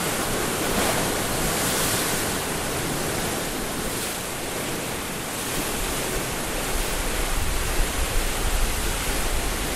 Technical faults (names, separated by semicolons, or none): MP2 compression